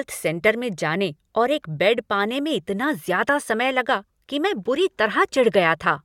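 Nothing stood out as a technical fault on listening to this speech recording.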